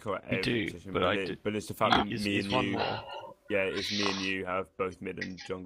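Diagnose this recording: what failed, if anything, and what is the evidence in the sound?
Nothing failed in this recording, and there's no evidence in the sound of any fault.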